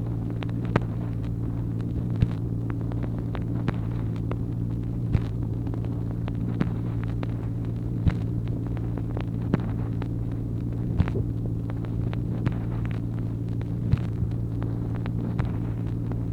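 There are no technical faults to describe in time order in this audio.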